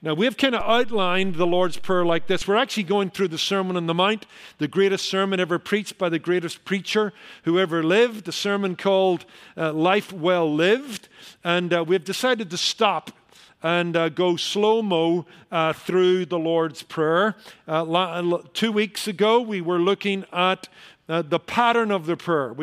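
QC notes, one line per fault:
0.61–2.42 s: DC step. The zero line jumps by about -25 dBFS and then returns, so each edge is a low thump under otherwise unchanged sound.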